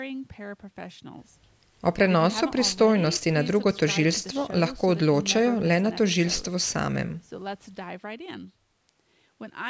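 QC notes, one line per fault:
The speech has passed through a call's microphone processing, which rolls off the lowest bass and leaves nothing above 8 kHz, both normal for that path.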